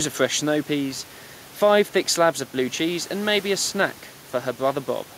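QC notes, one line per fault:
No fault to note in this clip.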